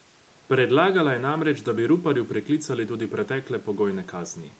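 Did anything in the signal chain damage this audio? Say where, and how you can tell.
No, nothing in the signal chain damaged this speech; the call processing and Opus path only limit it to nothing above 8 kHz, as expected.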